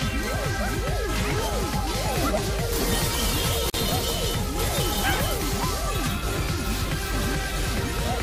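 At 3.70 to 3.74 s the sound drops into a 41 ms gap with smeared edges, then resumes: a gap at a join of separately encoded pieces, where untrimmed encoder delay and end padding remained.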